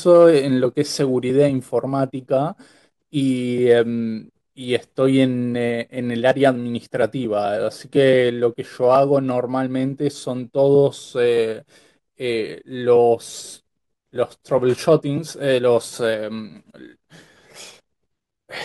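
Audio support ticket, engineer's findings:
Listened to the full speech recording; no audible faults found, no component implicated, nothing to action.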